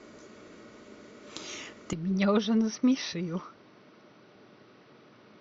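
At 1.93 s the input was likely switched to a poorer device, such as a headset's call profile. From there the speech has nothing above 6 kHz and turns dull and boxy, drops about 10 dB with no gap, and gains a faint new noise floor well below the speech.

At 4.35 s compressed frames were skipped: a stretch of coded audio was never decoded, so the speech jumps ahead by roughly 150 ms, which fits a run of 20 ms frames.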